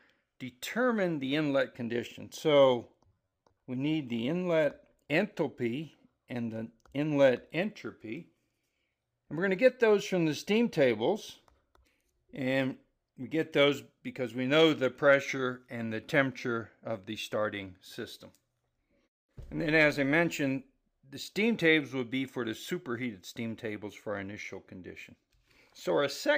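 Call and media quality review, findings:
Robotic sound from repeated short buffers, 3.07–3.60 s: rigid metallic buzz locked near 93.8 Hz. About half the audio replaced by repeats of a ~10.7 ms block, likely buffer underrun. Unlike dropouts, no gaps; unlike pitch shift, the buzz pitch stays fixed.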